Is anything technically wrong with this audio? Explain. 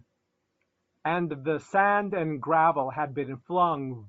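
Yes. Throughout the speech there is plainly audible Bluetooth LC3 compression, likely from an LE Audio link. Upper frequencies sound breathy and grainy, which fits about 32 kbps with 7.5 ms frames. On a spectrogram, the highs look patchy, with noise-filled blocks replacing real harmonic detail.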